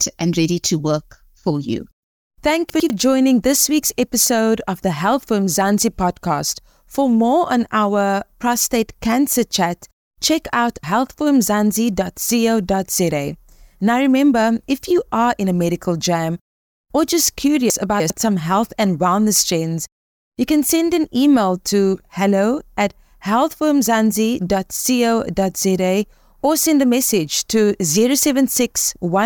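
At 2.7 to 2.9 s, just before "joining this week's episode", the speech has chunks out of order. A 100 ms block plays one slot late, after the block meant to follow it. Nothing is missing, but the sequence is swapped. There are hard joins, and the moment sounds jumbled. At 17.7 to 18.1 s, between "medical jam or just" and "some health and wellness", it happens again. Here a 100 ms block lands three chunks late, so the garble lasts longer.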